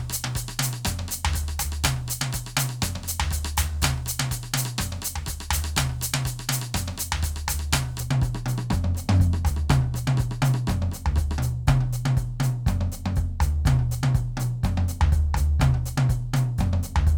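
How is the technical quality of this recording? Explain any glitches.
The recording has one clear fault, confined to the opening of the music. From 0.0 to 8.0 s, pre-emphasis is left on: the treble was boosted before transmission and the matching de-emphasis was never applied, leaving the top end about 11 dB hotter at 10 kHz than at 1 kHz, a tilt that fits the J.17 curve. The music sounds thin, glassy and sibilant until 8.0 s, then abruptly fuller. A spectrogram shows brighter energy above roughly 2 kHz for that stretch, with sharper, spikier transients in the waveform.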